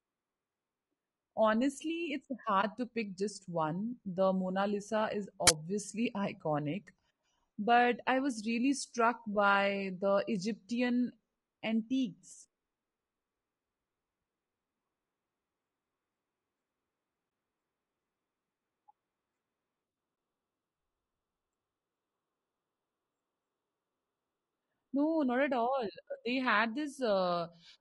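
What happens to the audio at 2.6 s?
At 2.61 to 2.64 s there is AAC frame loss with muting. What sounds like a single lost frame of about 20 ms was zeroed by the decoder, leaving a brief soft-edged dip. The waveform shows a brief tapered gap, and the spectrogram shows a narrow blank column. Around it the sound is rough and grainy, with noise filling the spaces between harmonics. That points to low-delay AAC compression, likely AAC-ELD at around 32 kbps.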